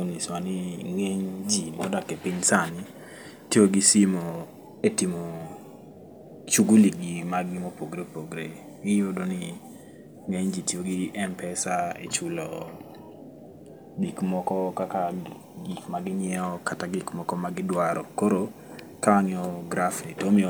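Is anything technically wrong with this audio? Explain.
No, nothing is technically wrong with this audio.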